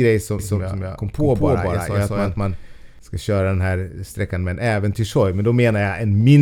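From 0.39 s to 2.99 s the speech is heard twice: a second, full-band copy trails the first by around 200 ms at roughly the same loudness, with no decay or room colour, so each syllable smears into a stuttering double. The copy switches on and off abruptly, clearing just before "ska köra den här". This is a doubled audio track, likely from the same signal being captured again through a slower path and mixed back in.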